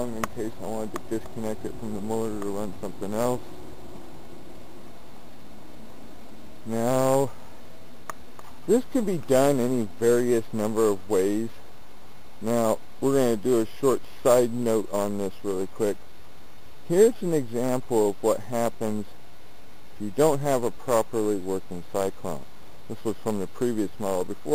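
Nothing is technically wrong with this audio.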